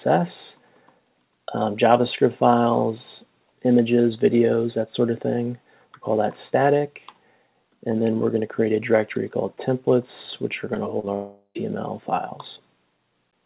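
At 10.74–10.77 s, then 10.99–11.05 s and 11.05–11.09 s, there are three bursts of short concealed packet loss. Roughly 20 to 40 ms of audio per gap failed to arrive, and the receiver extended the preceding sound to cover each hole before crossfading back. These are heard as quick smears, with the second and third running together into one slightly longer wobble.

From 11.15 to 11.57 s comes a longer break, likely a network dropout. For about 0.4 s the last sound is stretched into a fading buzz- or hiss-like continuation that ends in roughly 70 ms of near silence before the audio resumes, with that stretch of content simply gone. Throughout, the band stops at 4 kHz, consistent with a narrowband G.711 call path.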